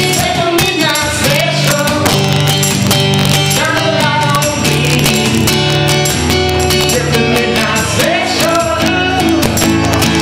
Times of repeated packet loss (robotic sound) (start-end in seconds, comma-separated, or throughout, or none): none